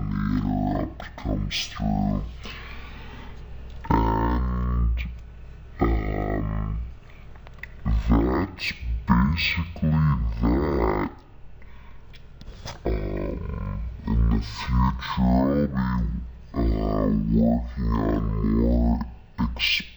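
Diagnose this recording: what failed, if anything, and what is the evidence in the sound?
The fault is stereo read as mono, at the sample-format conversion stage, and it runs through the whole recording. Interleaved left and right samples are being consumed as one channel, so every stereo frame becomes two consecutive mono samples. The sound plays at 0.5x speed and sits 12 semitones, a full octave, low. A plain sample-rate mismatch would also slow and lower the sound, but here a fainter mirrored copy appears in the upper half of the spectrum.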